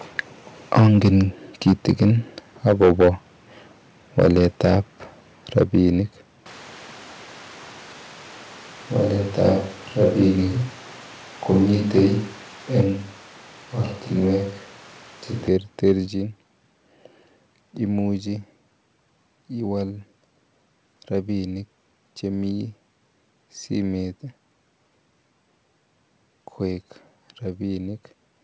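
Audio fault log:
0.19–3.09 s, 4.18–5.78 s, 9.41–10.22 s, 11.56–12.81 s and 15.86–15.92 s, microphone overload: the loudest peaks are flattened, giving a harsh crackle, worst in the first stretch at about 12 dB over and then about 7, 3, 4 and 1 dB. This is likely input gain set too high, driving the converter past full scale. Unlike codec roughness, the distortion follows the level peaks.
0.8 s, 5.63 s, 12.81 s and 16.08 s, microphone volume stepped down: voice and background drop together in single steps of about 3, 3, 4 and 5 dB. This is likely the call software cutting input gain after clipping, since each step falls inside or just after an overloaded stretch. A gain step differs from a microphone change because the tone stays the same and only the level falls.
6.46–15.48 s, switch to a distant microphone: the sound turns suddenly roomy and hollow and thinner in the bass, with room noise roughly 25 dB below the voice. 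The level stays about the same. This is likely a farther microphone being used in place of the close one, and the sound changes back just as abruptly. A gain step would change loudness but not the room character. The G.722 call path's top at 8 kHz is present throughout and does not change at either transition.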